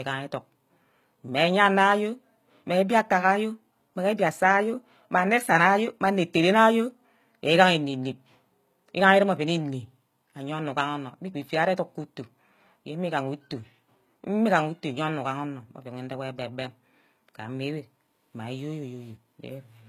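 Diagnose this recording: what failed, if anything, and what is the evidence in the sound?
The failure sits at the codec stage, throughout the speech. The file plays as a high-bitrate MP3, around 192 kbit/s, and its spectrum runs up to about 20.4 kHz. Yet the speech carries the smeared, artificial texture of a very aggressive encoder. That combination points to low-bitrate audio saved at a high bitrate, likely an HE-AAC encode near 20 kbit/s converted afterwards. The second encoder preserved the damage faithfully but could not restore the detail the first one discarded.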